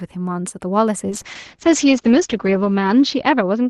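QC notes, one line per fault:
1.11–3.70 s, call bitrate drop: from 1.11 s to the end, the Opus call audio goes rougher and more muffled. The top end now stops at 8 kHz instead of 12 kHz, and the coarser, watery texture points to the encoder being pushed from around 48 kbps down to about 8 kbps after the bandwidth estimate dropped. It sits at its worst for about 1.3 s and never recovers before the clip ends.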